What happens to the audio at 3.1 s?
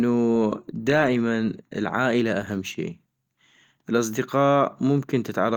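Nothing goes wrong at 3.1 s: the speech carries straight through that moment with no dropout, click, distortion or other fault.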